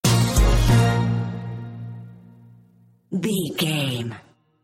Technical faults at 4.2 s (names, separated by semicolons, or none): none